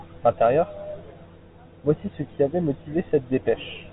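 No fault can be heard: the speech has the narrow telephone band of G.726 ADPCM, with nothing above about 3.8 kHz and only the light coding grain that fits the 32 kbit/s rate used by DECT cordless phones.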